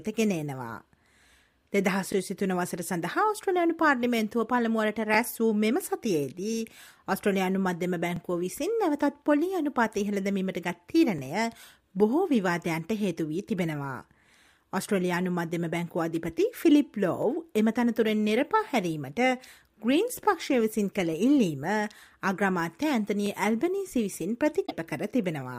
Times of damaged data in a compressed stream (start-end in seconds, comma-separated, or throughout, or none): 24.63-24.72